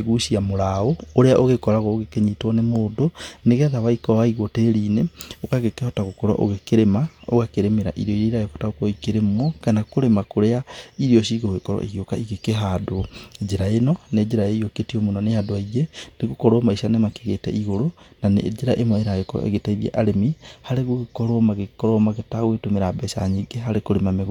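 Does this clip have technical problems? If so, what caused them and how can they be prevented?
No, the clip has no technical faults. Nothing in the audio calls for any fix or preventive step.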